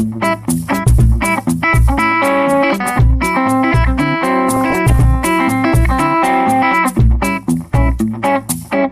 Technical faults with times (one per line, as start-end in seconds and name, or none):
0.00-8.92 MP2 compression
4.51-4.92 DAB burbling